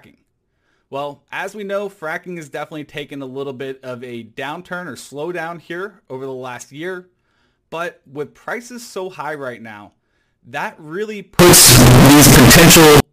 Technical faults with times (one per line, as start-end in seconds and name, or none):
11.39-13.00 float read as integer